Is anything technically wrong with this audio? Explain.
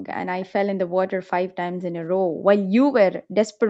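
Yes. Three times the echo canceller clamped down on the microphone while its loudspeaker was playing, which is background gated by the echo canceller. The room tone drops by about 8 dB at 0.00 to 0.06 s, then by about 40 dB at 2.13 to 2.46 s and 3.22 to 3.59 s, dipping or dropping out briefly before returning.

Between 0.10 and 0.16 s a very faint, delayed copy of the speech appears, trailing the original by 500 ms. This is likely an echo leak: the loudspeaker end's canceller failed to remove everything its microphone caught, so a scrap came back down the line.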